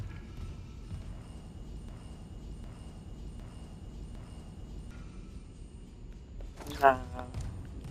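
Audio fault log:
1.89–4.91 s, broken-record loop: a 0.76 s chunk of sound plays four times back to back, identical each pass, so about three seconds of whatever belonged there is just gone. Likely the player or stream stalled and kept resending its last buffered fragment.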